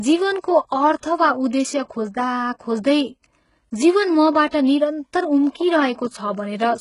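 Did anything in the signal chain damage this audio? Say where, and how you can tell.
Yes. HE-AAC compression damage runs through the whole clip at the codec stage. The speech has no content above about 11.1 kHz, and the treble that remains sounds synthetic: sibilants come out gritty and metallic, and upper harmonics don't line up with the fundamentals below them. That points to spectral band replication, which copies lower bands upward under a coarse envelope. The heavy damage likely comes from HE-AAC at a very low bitrate, around 12 kbps.

Pre-echo appears from 4.50 to 4.53 s, also at the codec stage. A short hiss of about 24 ms comes just before a sharp onset, and the attack itself sounds softened and smeared. The transform coder spread quantisation noise, sized for the loud attack, evenly across its whole block. Because the onset fell late in that block, the noise filled the quiet stretch before it, where nothing could mask it.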